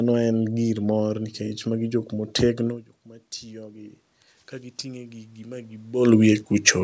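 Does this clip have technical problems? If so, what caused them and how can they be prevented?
Yes. After "magi jok motegno jok", automatic gain rises from 3.03 to 6.01 s. The input dropped about 21 dB as the talker moved back, so the gain crept up about 8 dB, swelling voice and room noise together. Keeping a steady distance from the microphone, or using slower, capped gain control, would prevent this.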